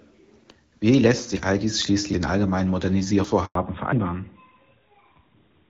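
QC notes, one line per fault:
0.51, 1.37, 2.13, 3.24 and 3.93 s, dropped buffer (overrun): the sound jumps ahead with no silence, likely because samples were overwritten before being read. Roughly a tenth of a second goes each time, about 0.3 s at 2.13 s between "all dies" and "den allgemeinen", and about 0.15 s at 3.24 s after "den allgemeinen". The skip is a splice, not a gap.
3.45 to 3.55 s, handover gap: the speech fades out within a few tens of milliseconds and stays silent for 100 ms while the call switches networks, with nothing arriving until the new link starts. Unlike the overruns, this is a true silence.
3.55 s to the end, fallback to narrowband: the call drops from AMR-WB at 12.65 kbit/s to AMR-NB at 12.2 kbit/s. Nothing above 4 kHz passes, so the voice turns duller and rougher than the HD Voice audio before it. This is a lasting change in tone, not a brief break.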